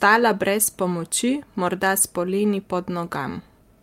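No technical faults are audible anywhere in the speech recording.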